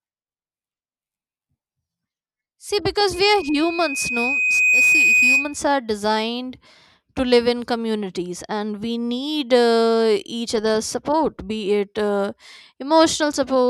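From 3.13 s to 5.60 s there is loudspeaker feedback squeal. The microphone is picking up its own loudspeaker, and at 2.5 kHz the loop gain has gone above one, so that frequency reinforces itself on every pass. It starts faint, swells over about a second and a half into a steady piercing whistle that ends up somewhat louder than the speech, and stops just before "are designed to live".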